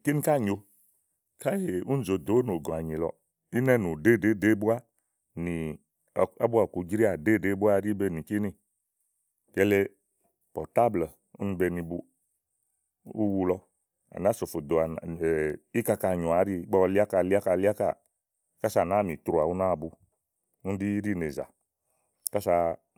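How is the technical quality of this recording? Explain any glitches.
No audible glitches or faults.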